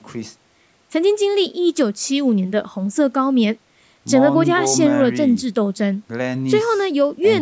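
Speech, with no technical faults to report. It has passed through call microphone processing, which removes the lowest bass and leaves nothing above 8 kHz.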